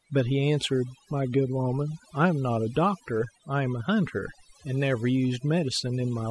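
Throughout the speech, overdone noise removal has gated individual frequency bands down whenever they resemble the noise floor, taking soft speech detail with them. Pauses drop to near silence with twinkling specks. A spectrogram shows scattered isolated dots between holed, patchy harmonics.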